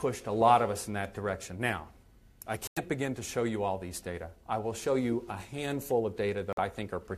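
Corrupt frame muted at 2.67 s and 6.53 s: damaged compressed frames were rejected by the decoder and replaced with silence, cutting abrupt holes of 0.13 s and 0.06 s, which fits about five and two frames, while the surrounding timing stays intact.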